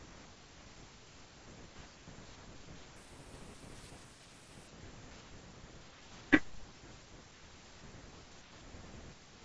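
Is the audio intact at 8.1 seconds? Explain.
Yes, the speech at 8.1 seconds is intact, with no dropout, click, distortion or other fault at that moment.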